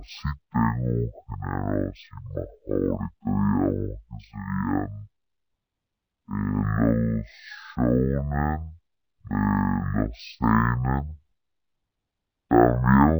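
Stereo read as mono runs throughout this speech clip: the left and right samples of each stereo frame are being played one after another as a single channel, so the speech comes out at 0.5x speed and 12 semitones low, with a faint mirrored copy in the upper spectrum.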